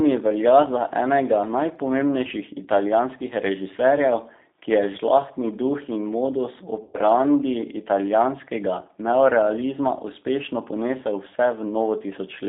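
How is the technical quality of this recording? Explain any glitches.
The recording is narrowband telephone speech with plainly audible codec damage throughout, plus one short dropout glitch in the middle.

Across the whole clip the G.729 codec sets the character. The band runs only from about 200 Hz to 3.7 kHz, and the texture fits an 8 kbit/s G.729A stream. Each 10 ms frame is resynthesised from a vocal-tract filter, a pitch predictor and a few excitation pulses, so the speech sounds slightly rough and synthetic. On a spectrogram, everything above 3.7 kHz is empty, and the harmonics look smeared and grainy rather than cleanly striated.

From 6.83 to 6.99 s there is VoIP packet loss concealed by the speech codec. The missing stretch, about 110 ms, fits roughly eleven lost 10 ms frames. The decoder filled the gap by repeating its last pitch and filter settings while lowering the gain, so the sound is stretched into a buzzy tone or a coloured noise that fades. 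It stays weak for a moment after real audio returns. On a waveform this shows as a steadily shrinking segment. On a spectrogram it appears as a smeared, unchanging stretch.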